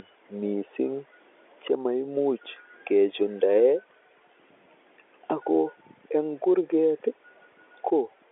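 No technical faults can be heard in the speech, which carries the band-limited sound of G.711 telephone coding, passing roughly 300 Hz to 3.4 kHz with nothing above 3.7 kHz and at most a faint trace of the level-following quantisation noise that its 8-bit logarithmic scale leaves.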